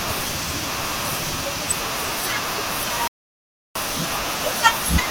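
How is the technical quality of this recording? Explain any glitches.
The recording has one clear glitch, a playback stall. From 3.08 to 3.75 s the speech cuts to silence for about 0.68 s, then resumes. The player likely ran short of data or had its audio thread blocked, so output stopped until it caught up.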